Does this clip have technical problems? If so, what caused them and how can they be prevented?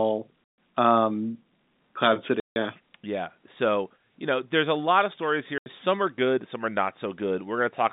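Yes, two problems can be heard.

Packet loss filled with silence: the receiver lost runs of packets and played nothing in their place, so the speech drops into dead gaps with abrupt edges. There is a hole of about 140 ms at 0.52 s, one of 160 ms from 2.40 to 2.56 s, and one of 80 ms from 5.58 to 5.66 s, just after "a lot of stories". All three gaps are multiples of 20 ms, which fits 20 ms packets dropped in bursts. Prevention: use a jitter buffer with packet loss concealment and forward error correction, and fix the congested or lossy network path.

Loudspeaker feedback squeal: a microphone picked up a loudspeaker it was feeding, and at 4.8 kHz the loop gain went past one. That tone reinforced itself on each pass, swelling over roughly a third of a second into a piercing squeal about 10 dB louder than the speech. It lasts from 3.73 to 4.18 s and ends just before "you know there's a". Prevention: keep microphones out of the loudspeaker's coverage, lower the monitor gain, and use a notch filter or feedback suppressor at the offending frequency.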